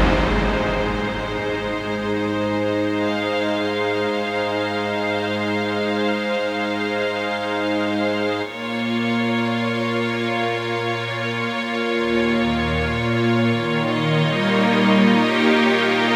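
A steady, raspy mains buzz runs under the audio for its whole length, sitting roughly 35 dB below the signal. It is built on 60 Hz, with harmonics reaching into the kilohertz range from sharp switching spikes, likely from a dimmer, rectifier or missing shield.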